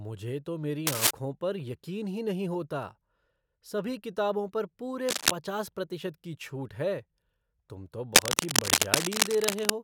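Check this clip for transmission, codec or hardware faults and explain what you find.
Three bursts of cable scratch noise break into the speech: 0.87–1.11 s, between "तो मेरी" and "पर यकीन ही नहीं"; 5.09–5.32 s, between "सभी किताबों पर पूरे" and "पचास प्रतिशत की छूट"; and 8.15–9.70 s, after "तुम तो". Each is a ragged scratching rustle sitting a few decibels above the speech. The likely cause is a worn lead or connector being handled, its contact resistance jittering. On a spectrogram they appear as dense broadband smears; on the waveform, as jagged, irregular spikes.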